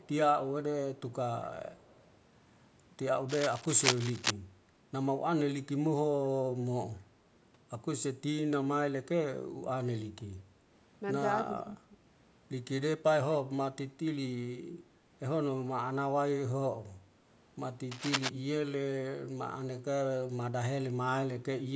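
From 0 to 0.11 s, and again from 1.76 to 2.07 s, a faint delayed copy of the speech trails the original by 227 ms. This is an echo leak: the far end was likely playing the call over a loudspeaker, and its echo canceller let part of what its microphone picked up pass back into the return path. The leaked copy sits roughly 35 dB below the main speech.

Between 3.28 and 4.31 s there is cable scratch noise, a dense, irregular crackling laid over the signal at about the same level as the speech itself. The cause is likely a worn cable, connector or control being moved, with its contact resistance jumping around rapidly as it shifts. A second, shorter burst runs from 17.91 to 18.29 s, about 5 dB quieter, with the same rustling, scratchy character.

From 11.44 to 11.97 s the speech is suppressed in double talk. Both ends were likely talking at once, and the echo canceller, unable to tell the near talker apart from loudspeaker echo, turned the signal down. 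Across roughly 400 ms of that span the speech dips by up to about 10 dB and sounds pulled back.

In the microphone processing, the call's high-pass filter trims the lowest bass, and nothing above 8 kHz is present.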